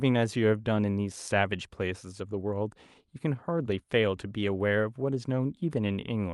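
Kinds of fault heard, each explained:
No faults are heard in this speech recording.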